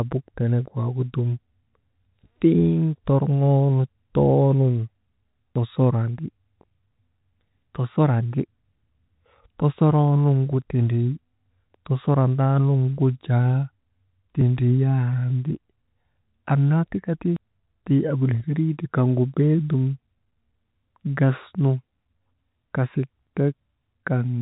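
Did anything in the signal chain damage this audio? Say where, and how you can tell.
Yes. The speech jumps abruptly at 5.56, 14.41, 17.36 and 23.27 s, each skip dropping roughly a twentieth of a second with no gap left behind. This is likely audio missing between chunks at the buffer stage, the spacing fitting 3-second chunks, under the telephone band's 3.8 kHz ceiling.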